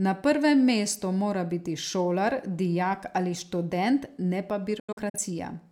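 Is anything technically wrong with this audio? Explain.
Yes. Between 4.79 and 5.19 s the speech shows a digital broadcast dropout: the receiver stopped getting valid frames and muted until good ones returned. Several short holes total about 170 ms across roughly 340 ms, the longest lasting 85 ms, which points to a handful of corrupted frames. Each hole fades out and back in over 8 ms, and the audio resumes further along in the programme. This is unlike packet-loss concealment, which fills gaps with repeated or smeared sound, because these holes are clean silence and the missing audio is never recovered.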